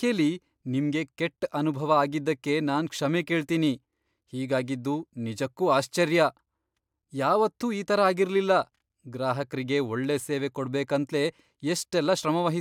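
No technical faults are audible anywhere in the speech recording.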